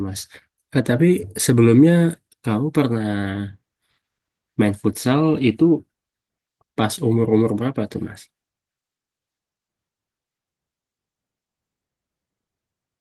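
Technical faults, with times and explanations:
No faults found; the speech carries Opus voice compression with only light coding texture audible.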